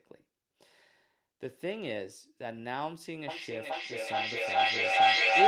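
Two devices in the room share the call, so from 3.28 s to the end feedback echo returns the speech about every 0.4 s, building to about 15 dB above it.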